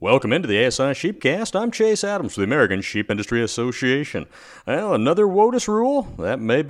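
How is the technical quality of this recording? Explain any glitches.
The speech has two brief dropouts from lost LE Audio frames. At 1.14 to 1.23 s, about 60 ms of audio goes missing across 90 ms in short runs of up to roughly 30 ms. At 3.07 to 3.10 s, a single gap of about 22 ms appears. The missing frames are concealed by the LC3 decoder, which repeats the last spectrum with randomised signs, so the voice turns briefly into a noisy smear. On a spectrogram, harmonics blur into broadband hash, and the waveform loses its periodic shape.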